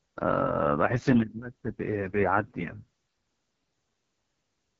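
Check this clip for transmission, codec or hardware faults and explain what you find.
There is one fault, and it runs through the whole speech clip: heavy AMR wideband (HD Voice) codec damage. The codec models the vocal tract and drives it with a sparse pulse excitation up to 6.4 kHz, then fills the band to 7 kHz with shaped noise. Nothing is present above about 7.5 kHz. The speech sounds rough and raspy, which fits the lowest AMR-WB mode, 6.6 kbit/s. The top of the band sits near 7 kHz rather than at 3.4 kHz, which separates this from narrowband AMR.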